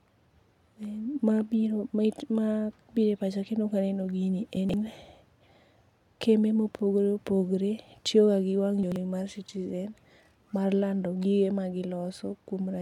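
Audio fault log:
4.57–4.74 s (after "pacha kendo kaneno gini") and 8.83–8.96 s: chunks out of order. Brief jumbles where a 43 ms piece plays three, then two, pieces late.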